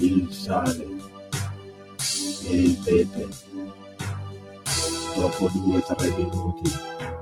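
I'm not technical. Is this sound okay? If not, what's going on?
No. A noise suppressor built for speech has been applied to music or sounds. Throughout the clip it treats steady, sustained parts as noise and turns them down, so the level swings noticeably. Sharp starts get through while held parts and tails thin out and pump.

In four places the sound is cut by the noise suppressor: 0.99 to 1.33 s, 1.55 to 1.99 s, 3.32 to 4.0 s and 4.31 to 4.66 s. Each time the sound drops sharply for a fraction of a second before it recovers.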